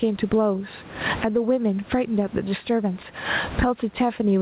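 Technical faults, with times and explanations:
Throughout, gain pumping. The gain swings by roughly 20 dB. Loud and soft parts sit close in level and sound squashed. Likely cause: input gain far too high, with a fast limiter pulling it down.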